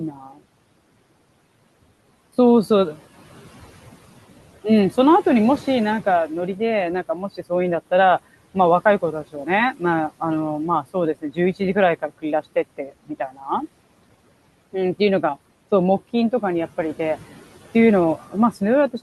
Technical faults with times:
0.11-0.39 speech cut by the noise suppressor
9.02-9.47 speech cut by the noise suppressor
12.77-13.43 speech cut by the noise suppressor

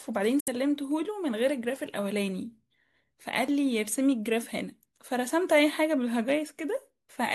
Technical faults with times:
0.40-0.48 Bluetooth dropout

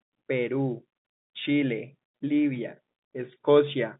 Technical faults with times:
none

